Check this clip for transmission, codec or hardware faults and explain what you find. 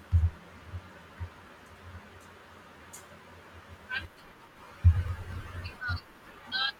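One fault: periodic USB or driver dropouts, from 4.84 to 6.52 s. Roughly every 0.24 s, something blocks the audio path and around 10 ms of speech is skipped. The joins close up abruptly, giving a steady train of ticks across the speech.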